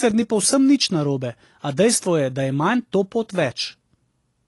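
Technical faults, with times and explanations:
Throughout, AAC compression. The speech sounds dull and smeared, and nothing is present above 11.5 kHz. Sibilants turn fizzy and sustained sounds take on a warble. The likely cause is AAC-LC coding at a low bitrate, with the damage pointing to something near 32 kbps. With so few bits, the encoder lowers its cut-off and quantises coarsely. Bands it cannot afford drop out or fill with noise, and that blurs the high detail.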